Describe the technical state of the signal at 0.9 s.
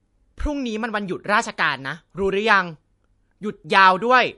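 At 0.9 s you're hearing low-bitrate audio saved at a high bitrate, and it runs the whole clip: nothing above 11.2 kHz, so the speech sounds dull and smeared. That's likely an early low-bitrate MP3 pass whose losses the later high-bitrate copy can't restore.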